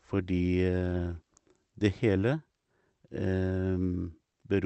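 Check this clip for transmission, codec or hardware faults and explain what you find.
Two related timing faults run through this speech clip, both caused by the sending and receiving clocks disagreeing.

Clock drift between sender and receiver: the sender's clock runs about 3% slower than the receiver's throughout. The receiver's jitter buffer keeps running low, so it must keep stretching the incoming audio to avoid running dry. The result is a faint, persistent unsteadiness rather than a single obvious glitch.

Repeated timing corrections: from 0.16 s to 4.33 s the receiver repeatedly inserts short repeated fragments to cover the shortfall. Playback runs at 97% speed and adds roughly 150 ms in total. Each insertion is tiny, heard as slight hiccups and an uneven, dragging tempo. The 8 kHz upper limit of the call codec's band can also be heard.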